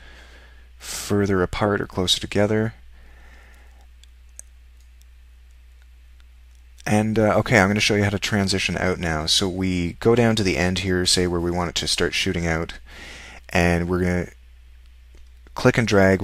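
No technical faults are audible.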